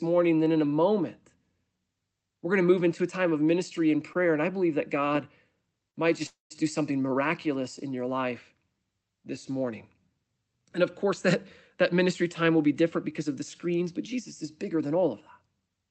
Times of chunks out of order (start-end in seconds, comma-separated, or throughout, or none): none